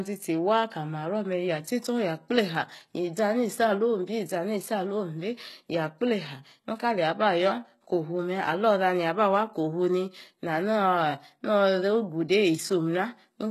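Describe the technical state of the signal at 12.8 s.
At 12.8 s the speech carries gritty, metallic treble, with lispy s sounds and nothing above 12.3 kHz, as throughout the clip. This is likely HE-AAC compression: treble rebuilt from copied lower bands with misaligned harmonics, fitting a bitrate near 16 kbps.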